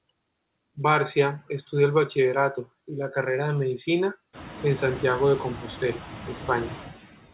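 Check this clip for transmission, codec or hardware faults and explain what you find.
One fault is present: noise suppressor artifacts throughout the clip. The suppressor pulls steady background noise down by about 15 dB frame by frame, so the residue sinks between phrases and swells under speech, especially after the room noise climbs sharply around four and a half seconds. Unlike codec distortion, this pumping follows the speech rather than the noise level. The band limit at 4 kHz, consistent with a narrowband G.711-type call path, is expected behaviour rather than a fault.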